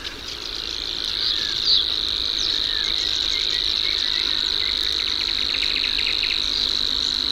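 At 6.09 to 6.11 s there is a repeated frame fault. One compressed block of about 23.2 ms plays twice in a row, so the sound catches in a brief stutter and runs 23.2 ms longer. On a waveform the same short segment appears twice back to back. A spectrogram shows a duplicated slice of texture there.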